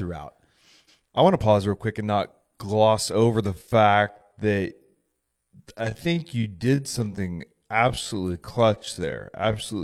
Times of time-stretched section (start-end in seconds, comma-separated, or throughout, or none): 3.42-9.84